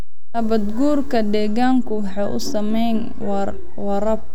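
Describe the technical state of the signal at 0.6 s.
DC offset is present at 0.6 s, as it is across the whole speech clip. The entire waveform sits displaced from zero by a constant amount of about -17 dBFS, so every sample carries the same fixed bias. That shift can't be heard as a tone or noise. It uses up headroom on one side of the waveform and appears as a steady band of energy at the very bottom of the spectrum.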